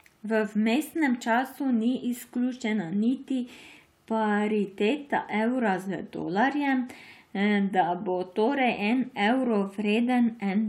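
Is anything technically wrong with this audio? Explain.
No, nothing technically wrong can be heard here.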